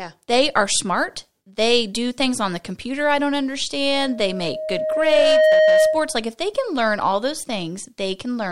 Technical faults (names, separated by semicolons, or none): loudspeaker feedback squeal